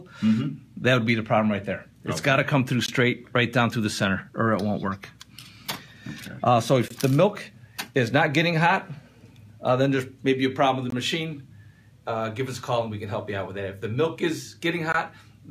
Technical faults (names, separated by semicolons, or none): gap between chunks